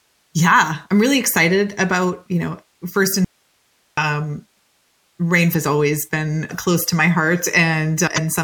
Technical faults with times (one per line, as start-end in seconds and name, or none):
3.25-3.97 audio dropout to a faint residue
5.50-5.55 damaged data in a compressed stream
8.14-8.18 damaged data in a compressed stream